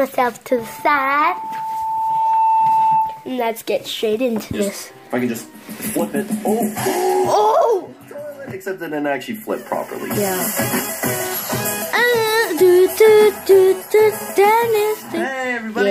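From 0.50 s to 3.36 s a loudspeaker feedback squeal rises: a single 886 Hz tone that swells over about two seconds until it sits roughly 5 dB above the sound. The microphone is re-amplifying its own loudspeaker output. That steady self-building pitch distinguishes it from broadband hiss or a clipped transient.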